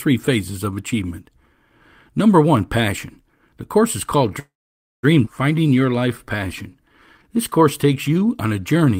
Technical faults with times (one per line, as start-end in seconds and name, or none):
4.39-5.05 call audio freeze
5.25-5.28 skip ahead
5.55-8.97 jitter buffer slow-down